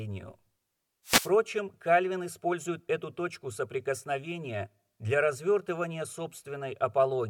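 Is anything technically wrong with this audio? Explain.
Yes. A wireless microphone noise hit occurs from 1.04 to 1.31 s in this speech. For about a quarter of a second, the analogue FM radio link from the microphone fades as reflected copies of the signal arrive out of phase and cancel at the receiver. With the wanted carrier weakened, the receiver's own noise rises through the audio, heard as a brief swish of static that washes over the voice before the signal recovers.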